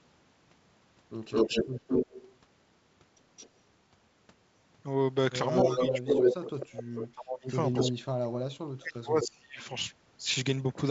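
An echo canceller on a loudspeaker side likely let part of its microphone pickup through, so an echo leak sends back a delayed copy of the speech. From 1.31 to 2.36 s it trails by 216 ms at about the talker's own level. At 3.36 to 3.49 s it is faint, about 20 dB down. From 5.57 to 6.79 s it returns 260 ms late at near full level.

Within that stretch, speech suppressed in double talk begins. The canceller, likely unable to separate the near talker from the echo, turns both down. The speech dips by up to about 20 dB from 5.68 to 6.12 s, and by up to about 25 dB from 6.78 to 7.5 s.

The echo comes back at 7.73 to 7.91 s. The deepest suppression follows, up to about 35 dB, from 7.88 to 9.61 s. A last echo, slightly quieter than the speech, overlaps it from 9.22 to 9.65 s. Throughout, the G.722 wideband coding adds at most faint damage of its own.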